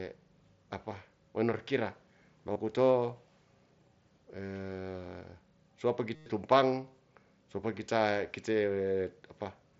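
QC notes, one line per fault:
2.53–2.56 s, 6.15–6.26 s and 9.45 s, concealed Bluetooth headset packet loss: the brief gap at 9.45 s is nearly hidden, but the 105 ms run at 6.15 s becomes a buzzy, full-level tone that warbles as real audio resumes. Lost headset-to-phone packets were filled by repeating the best-matching stretch of recent waveform.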